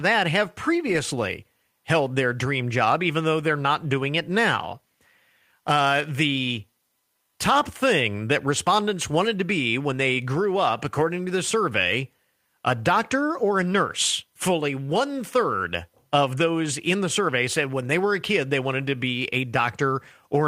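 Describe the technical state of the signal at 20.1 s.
At 20.1 s the speech signal is intact, with no audible dropout, distortion, clipping or other technical fault.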